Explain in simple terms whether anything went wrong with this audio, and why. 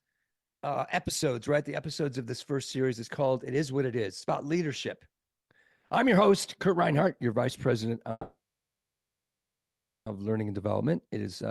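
Yes, two things went wrong. From 8.11 to 10.08 s there is a call audio freeze: the sound stalls, the last bit carries on briefly as a fading buzz or hiss, and then it goes quiet for about 1.7 s. This was likely caused by packets held up in transit. Unlike a dropout, nothing is lost. The audio resumes exactly where it stopped, only later.

From 10.34 s to the end there is a jitter buffer speed-up. To make up the delay, the receiver snips out many tiny pieces, roughly a tenth of a second in total. The audio runs at about 108% speed and sounds hurried, but the pitch stays the same, which sets it apart from a simple playback-speed change.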